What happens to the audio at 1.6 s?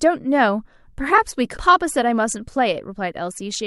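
At 1.56 to 1.58 s, compressed frames are skipped: roughly 300 ms of sound goes missing, consistent with about fifteen 23.2 ms frames dropped. Overlapping frames smear the join into a brief blip, not a click. A spectrogram shows a soft vertical smudge where harmonics jump discontinuously.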